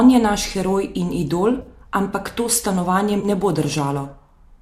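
A speech clip with two brief dropouts from AAC frame loss with concealment, each about 30 ms: at 1.62 to 1.67 s, between "naš heroj in idol" and "ampak to", and at 3.20 to 3.25 s, just before "ne bo". The length fits a run of three short low-delay frames. The decoder covers each gap from the last good spectrum, so each one sounds like a short smeared, noisy patch. On a spectrogram the harmonic lines blur into a narrow vertical band of diffuse energy, and the waveform shows a brief stretch of altered texture. The faint light graininess across the clip is likely low-delay AAC compression.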